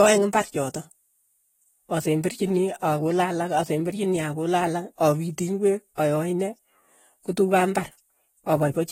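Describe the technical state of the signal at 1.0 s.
At 1.0 s the speech carries AAC compression damage, present across the whole clip. Nothing sounds above 16.6 kHz. The top end is dull, and sibilants have a smeared, fizzy texture. Coarse spectral quantisation is the likely cause, which fits a low bitrate around 24 kbps.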